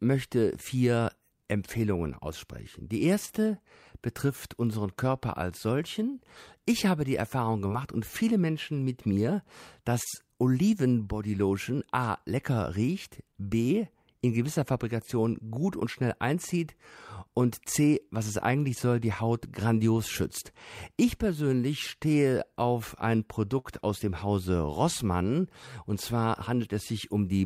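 Brief smears or wobbles at 3.25, 7.68, 10.04 and 13.31 s are short concealed packet loss: each time about 20 ms of speech never arrived, and the receiver bridged it by extending the preceding sound. At 23.59 s a held sound fading out, with about 60 ms of speech skipped, is a burst of packet loss, concealed by stretching the last sound while turning it down.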